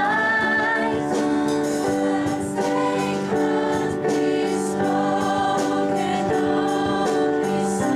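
No audible technical faults.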